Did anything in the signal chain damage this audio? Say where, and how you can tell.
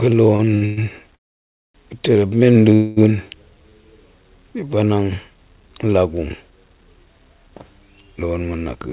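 Yes, the damage comes from the network and jitter-buffer stage of a call path. The band-limited sound, with nothing above 4 kHz, fits a G.711 A-law call at 64 kbps and is not itself a fault.

Repeated stalls (stutter) run from 0.36 to 0.79 s. Four short holds, the longest 114 ms, fill about half that span with continued sound, then the audio resumes intact. Late packets repeatedly drained the jitter buffer. Unlike a freeze, it is several brief catches rather than one long hold.

Call audio freezes occur at 1.15–1.76 s and 2.74–2.99 s. The first continues the last sound briefly, then drops to near-silence for about 0.6 s. The second holds a fading continuation for 0.22 s without going silent. Both then pick up where they stopped, with nothing lost. The likely cause is packets held up long enough to empty the buffer. Each is a single gap, not a stutter.

A jitter buffer slow-down runs from 3.51 to 3.83 s. 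The audio plays at 84% speed while keeping its pitch, adding 57 ms as repeated pitch periods drawn out in a row. There is no gap or fade, only stretching, which separates it from a freeze.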